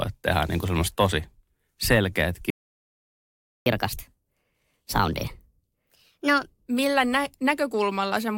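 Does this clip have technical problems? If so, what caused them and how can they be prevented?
Yes. A playback stall runs from 2.50 to 3.66 s: the speech cuts off mid-flow and the output sits silent for about 1.16 s before resuming. The silence is likely caused by the player's buffer running dry or its audio thread being held up, so nothing reached the output until data flowed again. A larger jitter buffer, with the audio thread kept at high priority and free of blocking work, would prevent this.

Catch-up at higher speed follows from 3.66 to 6.66 s. The player works through its backlog by resampling it to 1.25 times normal speed, so for those three seconds the speech is both rushed and raised in pitch by about four semitones. It then drops back to normal rate and pitch. Recovering lost time with pitch-preserving time-stretching, or by skipping ahead for live audio, would avoid the audible speed-up and pitch rise.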